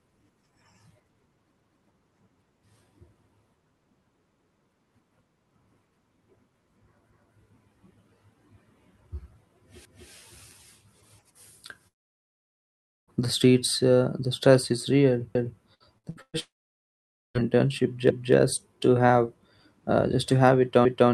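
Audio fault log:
9.85 s, 15.35 s, 18.1 s and 20.85 s: overlapping chunks. At each of these joins about 250 ms of sound plays twice, heard as a short stutter with a click at the seam. This points to audio handled in 2.5 s blocks where each new block starts a quarter second before the previous one finished. The one at 15.35 s comes right after "the stress is real", the one at 18.1 s just before "to have uh just", and the one at 20.85 s sits between "just to have it" and "your resume can be".
11.87 to 13.10 s and 16.39 to 17.37 s: long network dropout. In each case the last sound carries on briefly as a fading buzz, then gives way to silence lasting about 0.94 s and 0.88 s respectively. Close to a second of audio is simply gone each time, and the sound picks up further on without it. This is likely a stall in delivery where the receiver could only stretch the final fragment before running out.
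15.74 to 16.36 s: repeated packet loss (robotic sound). Four separate holes open up in about 0.6 s, the longest about 116 ms, together removing around 300 ms. Each is patched by extending the preceding sound, so nearly half of this span is synthetic fill. The quick alternation of real and patched audio gives a choppy quality, and it runs straight into the second dropout just after.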